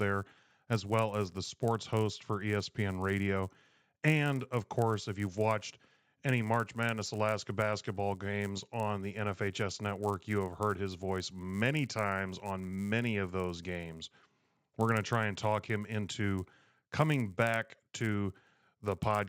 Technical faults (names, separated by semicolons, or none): resampler restarted on every block